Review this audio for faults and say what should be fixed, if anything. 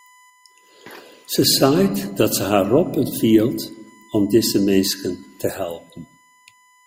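A steady USB whine runs under the speech for the whole clip, a fixed tone at 1 kHz sitting roughly 35 dB below the voice. The bus pulls current in 1 ms frames, and that pulsing leaks through shared power or ground into the audio path. Unlike mains hum, which sits at 50 or 60 Hz and its harmonics, this pitch lands on the 1 kHz frame rate. To prevent it, power the interface separately or fit a USB isolator.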